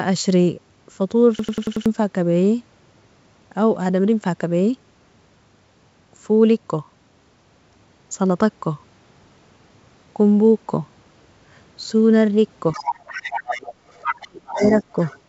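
A system hang loop at 1.39 to 1.86 s interrupts this speech recording: one 93 ms slice of audio repeats exactly five times, a stutter at 10.8 Hz that fits a 4096-sample ring buffer cycling while the system froze, so roughly half a second of real audio is lost. The other side's voice leaking through appears from 12.72 to 14.28 s at about 10 dB below the talker, again from 14.47 to 14.84 s at about 15 dB below, and from 15.0 to 15.19 s at about 25 dB below, likely far-end loudspeaker sound that the echo canceller failed to remove from the microphone. Speech suppressed in double talk overlaps these stretches: the talker drops by up to about 35 dB between 14.15 and 14.61 s and by about 10 dB between 14.79 and 14.98 s, likely the echo canceller pulling down both voices when it could not separate them. Across the whole clip, the G.722 call path at 64 kbps leaves nothing above 8 kHz.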